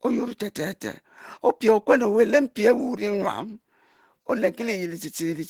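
Opus compression runs throughout, from start to finish. The degradation is plainly audible: the speech sounds hoarse and somewhat muffled, with a rough, grainy texture rather than swirling holes, and content still reaches up to about 20.2 kHz. That points to likely Opus compression working in its hybrid speech mode. The encoder models the lower band as speech and fills the upper bands coarsely, which fits a low bitrate of around 16 kbps.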